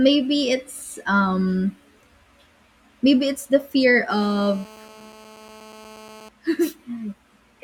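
GSM phone buzz runs from 4.10 to 6.29 s, just after "maybe it's the fear". A nearby 2G phone on a call pulses its transmitter about 217 times a second, and the audio circuit rectifies those bursts into a hard, raspy buzz rich in harmonics, steady, about 23 dB below the speech.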